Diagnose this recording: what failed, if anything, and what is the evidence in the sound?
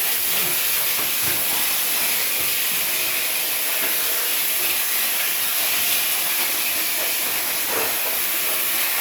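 Nothing in it failed.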